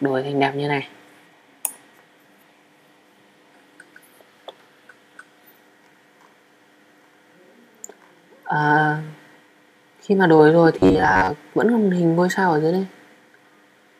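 From 10.79 to 11.36 s the sound turns into a rigid, metallic buzz fixed near 94 Hz: robotic sound from repeated short buffers, likely caused by audio arriving too seldom, so a roughly 11 ms slice repeats for about half the time. Unlike dropouts, nothing falls silent; a steady pitch replaces the gaps.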